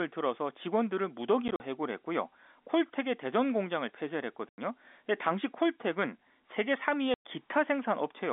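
Packet loss filled with silence hits this telephone-band speech at 1.48 s, 4.49 s and 7.14 s. Missing packets are replaced by dead silence, leaving hard-edged gaps of about 60 ms (scattered), 90 ms and 110 ms, which fits 10 ms packets.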